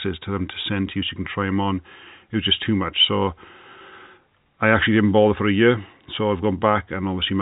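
No faults can be heard in the signal, which carries the narrow band of G.711 telephone coding at 64 kbps with nothing above about 3.8 kHz.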